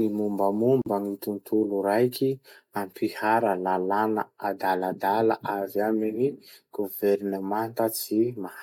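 At 0.82 s the speech drops into a gap at a join of encoded pieces, about 44 ms of silence running to 0.86 s. Two separately encoded segments were butted together untrimmed, leaving encoder delay and end padding in place; the codec smears the edges of the gap.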